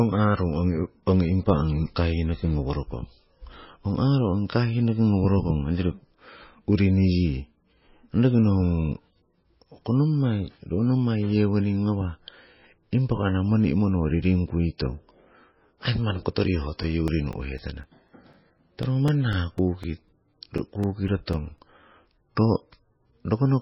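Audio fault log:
Throughout, MP3 compression. Nothing is heard above 5.6 kHz, so the speech sounds dull and muffled. Heavy damage gives a watery, swirling texture and smeared consonants. This is likely a very low-bitrate MP3, fitting roughly 17 kbps.
16.83 to 21.59 s, periodic USB or driver dropouts. Just after "aii manni kotoriho", brief gaps of a few milliseconds repeat every 0.25 s, about twenty in all. Each gap drops the audio to silence, so the speech carries a steady ticking.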